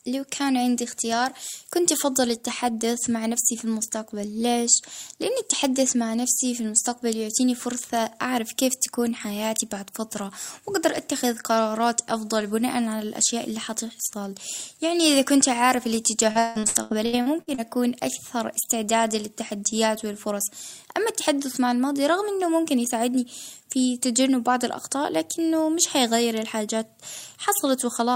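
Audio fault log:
16.31 to 17.61 s, repeated packet loss (robotic sound): across this 1.3 s stretch the speech breaks into roughly ten closely spaced holes, the longest about 161 ms. Each hole is patched by stretching the last fragment, so nearly half the span is synthetic fill. Unlike a single dropout or a steady codec artefact, the chop recurs rapidly and then stops, which points to bursty network loss.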